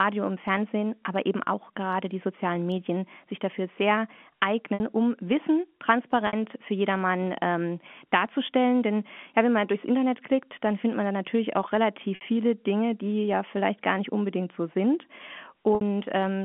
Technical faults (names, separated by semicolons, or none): packet loss with pitch repetition; bit error spike